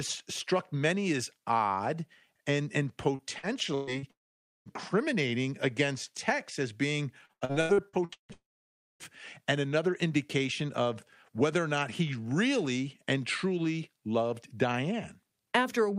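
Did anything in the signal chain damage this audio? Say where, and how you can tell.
Yes, the damage happened at the network stage. Repeated packet loss produces choppy, robotic speech from 3.15 to 4.06 s (four gaps, longest 123 ms) and from 7.26 to 8.32 s (eight gaps, longest 158 ms, nearly half concealed). Each hole is bridged by repeating the last sound, which shows as smeared, striped harmonics on a spectrogram.

Immediately afterwards, from 4.11 to 4.69 s and from 8.33 to 9.03 s, a brief fading buzz gives way to about 0.5 and 0.6 s of silence, and speech then resumes with that stretch missing. This is likely a long network dropout. The waveform shows flat gaps, and the spectrogram shows blank columns.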